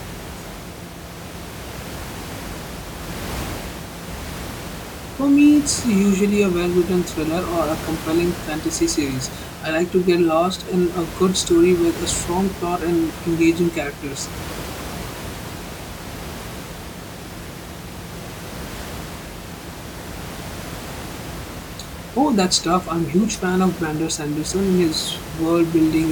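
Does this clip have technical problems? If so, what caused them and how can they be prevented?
No, nothing technical goes wrong in this speech clip, and the bit of room noise sitting about 13 dB below the speech is just part of the space it was recorded in, so there's nothing here that needs preventing.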